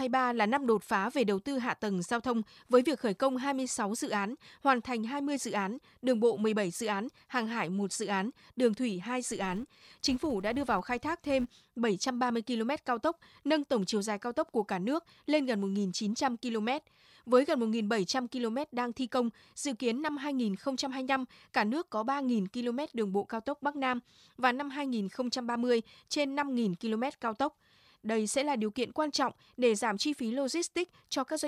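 A filter restarted on every block, from 9.25 to 11.61 s of this speech clip, resets at each block boundary, leaving a 200 Hz buzz that tracks the speech level.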